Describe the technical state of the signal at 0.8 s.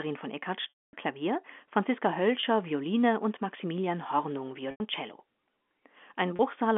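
Packet loss with pitch repetition, 0.70 to 0.93 s: the last pitch period repeats as a brief buzzy hold, fades into silence, then sound cross-fades back, unlike a clean dropout.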